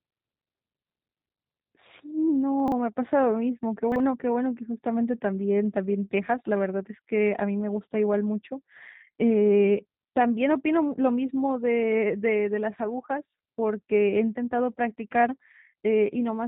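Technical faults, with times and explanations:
Throughout: G.729 codec. The sound is rebuilt from a vocal-tract filter, a pitch predictor and a few pulses per 10 ms frame, consistent with 8 kbit/s. It cuts off sharply at 3.8 kHz and has a plainly audible buzzy, synthetic roughness, unlike the clean dullness of simple low-pass filtering.
2.60–2.72 s and 3.92–4.00 s: chunks out of order. A 40 ms chunk plays late, two chunks behind at 2.6 s and one behind at 3.92 s. The speech jumbles briefly, with three hard joins each time. Nothing goes missing, which separates this from a dropout or packet loss.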